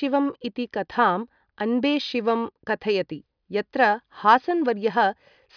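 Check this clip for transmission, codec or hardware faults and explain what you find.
No faults detected.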